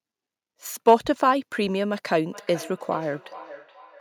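It's a short speech clip with two problems. Around 0.88 to 0.94 s there's hard clipping: the peaks run only about 2 dB past what some stage could pass, so they're sliced flat and you get a brief crackle rather than full-on fuzz. Then from 2.31 s to the end there's feedback echo between two devices. A second device in the same room is replaying this mic's signal, which gets picked up again, so the speech comes back roughly every 0.4 s, sitting quietly at about 19 dB under the talker.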